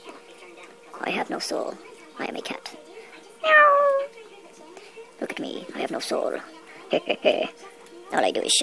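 From start to finish the whole clip runs fast and high, a wrong sample rate problem. Everything plays 1.5 times too quickly and sits about 7 semitones sharp, which fits audio captured at 16 kHz being played back at 24 kHz with no conversion in between.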